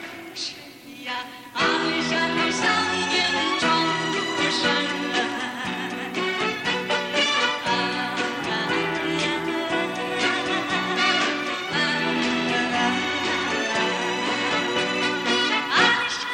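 Two unsynchronised device clocks, likely around 400 ppm apart, cause clock slip clicks throughout the audio from 0.12 to 16.33 s: single-sample slips about every 50 ms, heard as a soft rattle.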